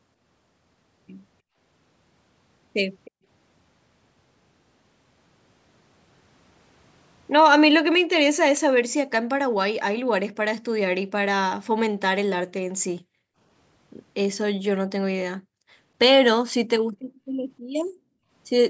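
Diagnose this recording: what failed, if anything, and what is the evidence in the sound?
Call processing on the speech is the failing stage: the echo canceller's suppressor is clamping the microphone path. At 1.42–1.57, 3.11–3.25, 7.98–8.13, 11.65–11.75, 12.95–13.38, 17.15–17.35 and 17.6–18.3 s, the room background dips by about 32 to 40 dB, mostly for around 150 ms and up to half a second near the end, then recovers. This is background gated by the echo canceller, not packet loss: the floor ducks and releases instead of leaving hard silent holes or glitches.

At 3.05–3.11 s a faint copy of earlier sound arrives 311 ms late, roughly 25 dB under the speech, immediately before the gate at 3.11 s clamps down. A single discrete repeat at a fixed lag is not room reverberation, which would smear continuously. It is likely an echo leak, where the far end's loudspeaker sound reached its microphone and the canceller did not fully remove it. 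The band stopping at 8 kHz is the call microphone processing working normally.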